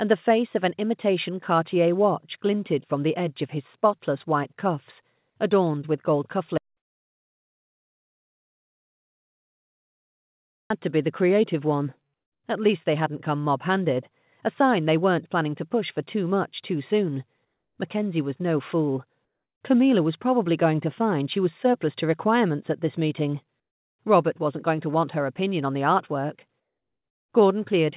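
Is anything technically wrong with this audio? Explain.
Yes. Most likely the input feed was lost, with the recorder continuing to write silence. This produces an audio dropout to silence from 6.58 to 10.70 s. The sound stops abruptly, and for about 4.1 seconds there is silence, not even room tone, before it resumes mid-flow. Whatever occurred in that stretch is simply missing. The band-limited, telephone-like character around it, with nothing above 4 kHz, matches a G.711 call path.

Twice more, the sender appears to have paused transmission during quiet moments, leaving the receiver to synthesize filler. This is comfort noise in place of the background, at 12.14 to 12.44 s (300 ms) and 17.45 to 17.78 s (330 ms). The real background, already about 58 dB below the loudest parts, is swapped for a smoother noise of a different tone that loses its natural texture. The level drops by about 13 dB in the first patch and about 5 dB in the second.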